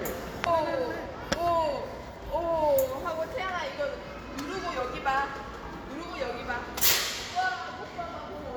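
A recording of sounds with two instances of compressed frames skipped, where whole frames of the encoded stream never reach the output, either lost from the file or rejected by the decoder as corrupt. At 0.42 to 0.48 s the audio lurches forward by roughly 0.4 s, several frames' worth. At 6.88 to 6.93 s it jumps about 0.1 s, a couple of frames. The jump sizes fit a frame length of about 46 ms.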